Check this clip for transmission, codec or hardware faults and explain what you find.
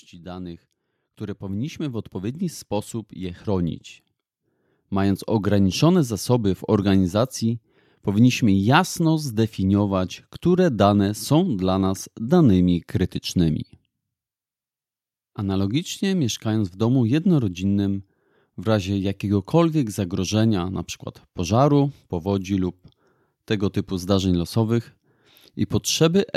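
One fault is present, an automatic gain rising. From 0.22 to 5.74 s the speech and the background noise swell together, climbing by about 13 dB. The automatic gain control judged the input too quiet and raised its gain step by step across those five seconds.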